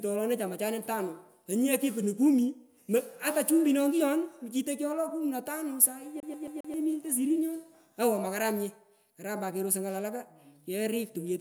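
A CD stuck on one turn jumps the laser back a track, so the same 0.13 s slice stutters four times from 6.20 to 6.74 s, after "na tano sahi".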